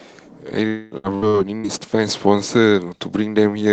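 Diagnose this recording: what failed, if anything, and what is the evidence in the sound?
From 0.67 to 0.94 s the speech stops and is replaced by a smeared buzz that carries on from the last sound and fades for roughly a quarter of a second. Normal speech then resumes with about 240 ms of material simply gone. This is a long network dropout, likely at the network stage: no packets reached the receiver for that stretch, so the Opus decoder's concealment extended the last sound until the stream came back.

Right after that, from 0.97 to 1.67 s, the audio turns choppy. Four short holes break it up, the longest about 64 ms, and each is patched with a brief continuation of the last sound, so around a third of that span is synthesised fill. This is repeated packet loss (robotic sound) on the network stage, with packets lost or late again and again while concealment bridges each gap. The call path limits the band to 8 kHz throughout.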